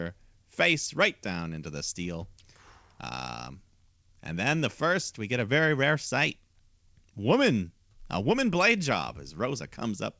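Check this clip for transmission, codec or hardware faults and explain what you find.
No faults can be heard in this speech recording.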